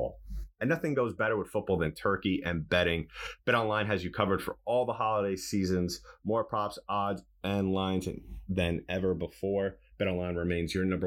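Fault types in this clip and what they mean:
Channels drifting apart: The two channels of this speech were captured on devices running from separate clocks, which fits a mismatch of around 70 parts per million, so the offset between them grows steadily through the clip to roughly half a millisecond by the end. When the channels are summed to mono, the comb-filter notches this offset creates glide slowly across the spectrum, and the speech takes on a slowly sweeping flanging colour throughout.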